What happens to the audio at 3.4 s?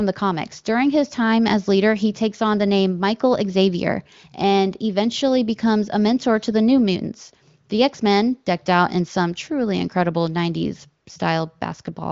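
Nothing goes wrong at 3.4 s: the speech there comes through the AMR wideband (HD Voice) codec intact, with its usual clean sound and no content above about 7.5 kHz.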